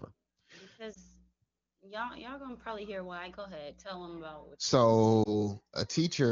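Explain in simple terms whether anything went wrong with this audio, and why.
Two short faults are audible, both lost AMR speech frames, at 0.93 to 0.97 s and at 5.24 to 5.46 s. In each case one 20 ms frame failed its radio checksum, so the AMR wideband (HD Voice) decoder patched the gap by reusing the previous frame's sound with falling volume, which causes a brief dip or warble.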